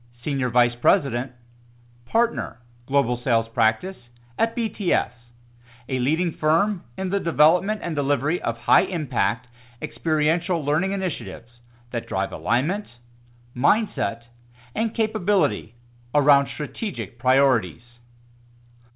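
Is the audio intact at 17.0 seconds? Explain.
Yes, the speech is intact at 17.0 s, with no fault at that moment, and it carries the narrow band of a G.711 mu-law call path, with nothing above 4 kHz.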